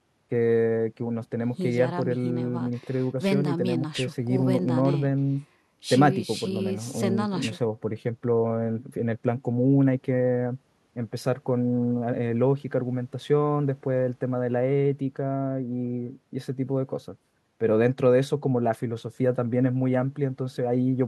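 No technical faults can be heard anywhere in this recording.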